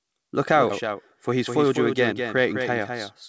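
A second copy of the speech is likely being captured by a slower path and mixed back in, so the whole clip carries a full-band doubled audio track, a few dB quieter and about a fifth of a second late. At 0.70 s, a skip ahead drops about 0.4 s of speech, splicing the two sides together with no gap. From 0.87 to 2.85 s, a jitter buffer speed-up trims pitch periods to shed roughly 150 ms of excess delay, so the speech runs about 6% faster at unchanged pitch and sounds hurried. All of this passes through a wideband G.722 call path, which fits 64 kbps and leaves nothing above 8 kHz.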